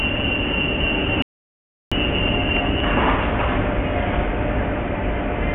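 The input signal was likely lost briefly, leaving an audio dropout to silence from 1.22 to 1.92 s: about 0.69 s of silence, no room tone, before the audio resumes mid-flow.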